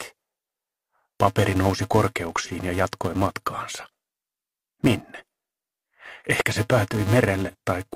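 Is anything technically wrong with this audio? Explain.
Yes, two things. Throughout the clip there's a filter restarted on every block: it drops its state at each block boundary and starts from silence, so every block opens with a small click. Those clicks come at about 375 Hz, which fits a 128-sample block, and they form a steady buzz that rises and falls with the level of the sound.

There are also three short dropouts, at 2.44, 5.18 and 7.48 s, from AAC frame loss with concealment. Each gap is about 43 ms long, which fits a single lost frame. The decoder patches it from the last good spectrum, so you hear a brief smeared, noisy or phasey blip.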